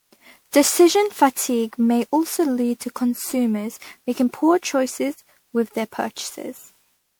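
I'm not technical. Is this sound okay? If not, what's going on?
No. From start to finish the speech sounds swirly, hollow and smeared, with the starts of sounds blurred. This is generation loss, likely from the recording being saved as an MP3 about ten times over, each save adding fresh damage.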